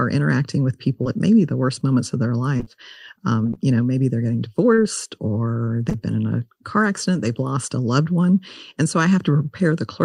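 The whole clip of speech has a hollow, phasey tone from channel delay (comb filtering): one channel trails by under a millisecond, so the mono sum notches out around 700 Hz and its odd multiples. At 1.03 s, between "interacting with" and "at maybe the worst", a short concealed packet loss patches a roughly 20 ms hole by extending the previous sound, leaving a brief smear. From 2.57 to 3.58 s, repeated packet loss (robotic sound) punches six small holes, the longest 24 ms, and each gets patched, giving a choppy stretch. More short concealed packet losses follow: at 4.74 s a 40 ms gap is bridged with a brief wobble, then at 5.90 and 5.93 s, just before "been in a car", two quick holes get filled in succession, adding about 10 ms and smearing that spot.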